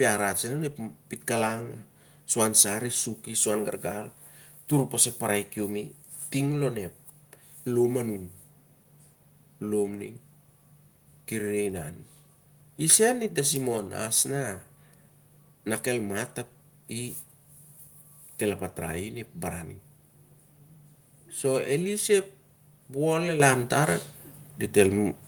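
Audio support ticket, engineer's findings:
Microphone volume stepped up at 23.4 s: voice and background jump together by about 8 dB in one step. Call software's input gain control raising the device volume.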